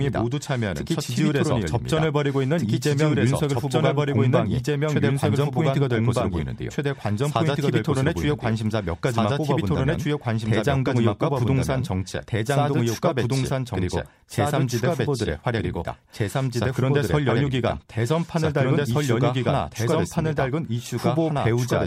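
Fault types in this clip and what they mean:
Doubled audio track: the speech plays twice. A full-band copy, about equally loud, trails about two seconds behind. Likely a slower second path or edit.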